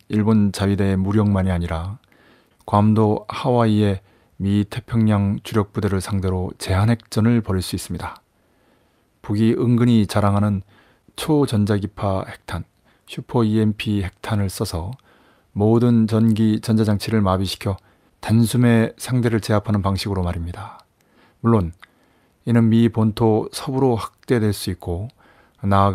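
Clock drift between sender and receiver runs through the whole speech clip. The sender's clock runs about 5 percent fast. Audio arrives quicker than the receiver plays it out. Its buffer keeps overfilling, so small pieces must be dropped to keep up.

Repeated timing corrections follow from that, from 0.27 s to 25.9 s. The receiver keeps trimming short pieces, pushing the effective pace to 105 percent. The cuts come unevenly.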